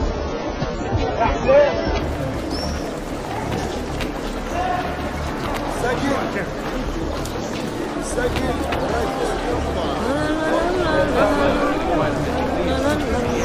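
From 0 to 2.0 s the adaptive stream is starting at a low bitrate: treble is absent above 7.5 kHz and codec smearing is strong, which fits a very low AAC rate. At 2.0 s the spectrogram's flat ceiling lifts abruptly, with no gap in the waveform.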